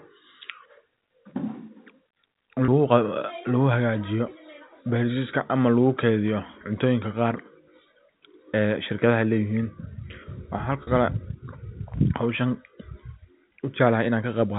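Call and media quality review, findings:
Packet loss with pitch repetition, 2.65–2.68 s: brief held, buzzy tone where about 30 ms of audio dropped out; receiver concealment repeated the last pitch period to bridge the gap, consistent with three 10 ms packets lost.

Packet loss with pitch repetition, 10.83–10.87 s: same held buzz, slightly longer, covering about 40 ms of lost audio. Points to four consecutive packets missing, jitter buffer or network path. Both gaps are too short to fade to silence. The G.711 mu-law band limit below 4 kHz is audible throughout.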